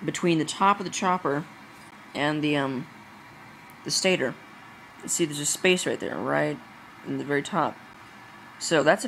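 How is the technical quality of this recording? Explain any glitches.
Two brief silent holes interrupt the sound, at 1.91 s and 7.93 s. Each is a gap between stream segments, about 14 ms and 10 ms long. The segments appear to be 2 s long, and at these two boundaries their timestamps don't quite meet, so the player fills the shortfall with silence. The result is a hard-edged click-like break. Unlike a packet-loss dropout, nothing is removed: the sound resumes exactly where it left off, just slightly delayed.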